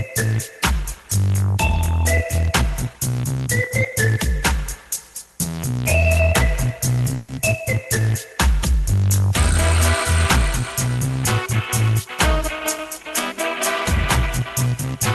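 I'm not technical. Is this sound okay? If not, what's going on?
No. Around 7.15 to 7.29 s there is a call audio freeze: incoming audio was likely held up on its way, so the receiver stretched the last sound into a brief fading buzz for about 0.13 s before continuing.

From 13.97 to 14.97 s there is a jitter buffer speed-up: the receiver trimmed tiny slices to catch up, so the sound runs about 4% faster at the same pitch.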